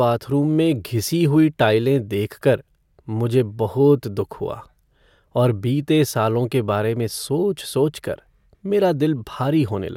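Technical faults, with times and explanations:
No technical faults detected.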